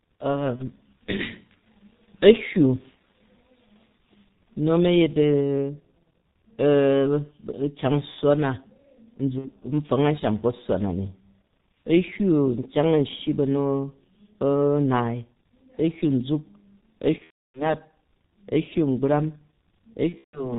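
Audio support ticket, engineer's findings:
G.723.1 codec, full length: narrowband low-rate coder, heavy damage, consistent with the 6.3 kbit/s mode. Nothing above 4 kHz, so the audio is muffled. The 30 ms frames and a slowly updated voice model smear transitions: speech sounds hoarse, consonants blurred and indistinct throughout.

VoIP packet loss concealed by the speech codec, four events: decoder extrapolating last pitch and filter across gaps, gain dropping frame by frame. 0.56–0.62 s and 9.39–9.52 s: about 30 ms and 60 ms missing, short concealment smear. 17.18–17.75 s: 330 ms lost across 360 ms, longest run 300 ms, speech stretched and fading, then muted from the third lost frame. 20.09–20.57 s: 180 ms lost across 270 ms, longest run 150 ms, same decay. After the longer gaps, speech stays weak and distorted until the decoder state recovers.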